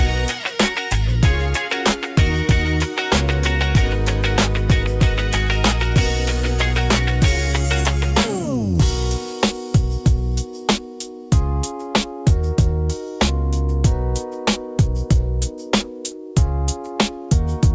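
Nothing here stands out as a fault; the sound has simply been through an ordinary call connection, and the way everything stops at about 8 kHz fits a wideband codec such as G.722 running at around 64 kbps.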